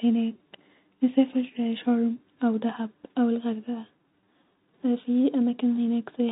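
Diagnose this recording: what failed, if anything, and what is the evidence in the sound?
Nothing failed: the speech sits in the narrow band of ordinary G.711 telephone coding, with nothing above 3.8 kHz, and no stage in the chain shows a fault.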